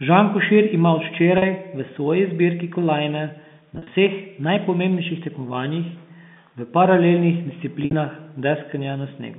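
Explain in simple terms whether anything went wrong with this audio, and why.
Yes, the speech breaks up three times from packet loss with pitch repetition. At 1.38 s, between "ima od" and "v svoji zbirki kolajne", about 40 ms goes missing. From 3.75 to 3.87 s, before "vseh najpomembnejših", and from 7.83 to 7.93 s, after "v paralelnih", the losses are scattered. Instead of clean silent gaps, the receiver repeats the last pitch cycle to fill them, so the voice briefly holds a slightly buzzy tone.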